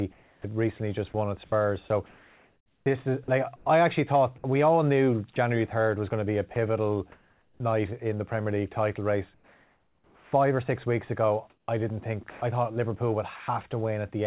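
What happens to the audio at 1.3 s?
At 1.3 s you're inside a stretch, from 0.12 to 7.6 s, where the sound keeps dropping out and being filled with a soft hiss. That's likely sound chopped by the voice detector, which swapped about 1.9 s of quiet material for comfort noise.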